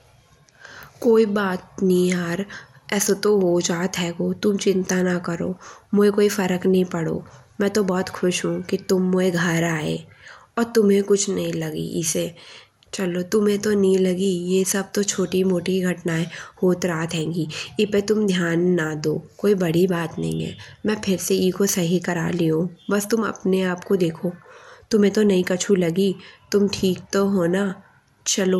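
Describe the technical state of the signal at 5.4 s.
MP2 compression is present at 5.4 s, as it is across the whole clip. The speech sounds dull and plainly gurgling, with a granular roughness and nothing above about 17.3 kHz. The likely cause is MPEG Layer II coding at a low rate, around 80 kbps, where starved upper sub-bands drop out and the remaining bands are coarsely quantised.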